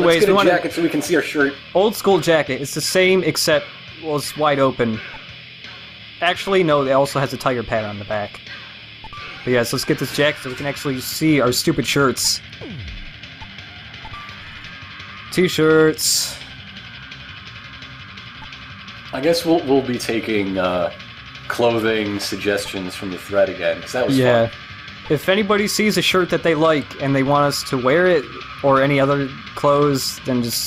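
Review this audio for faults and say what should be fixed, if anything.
Nothing here needs fixing, as no technical faults turn up anywhere in the audio, so it can stay as it is.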